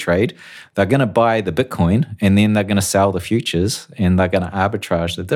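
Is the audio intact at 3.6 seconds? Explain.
Yes, at 3.6 seconds the speech plays through intact, with no dropout, click, distortion or other audible fault at that moment.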